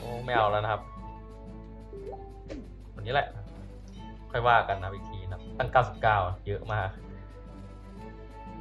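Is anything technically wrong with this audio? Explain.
No, nothing technically wrong stood out on listening to this audio.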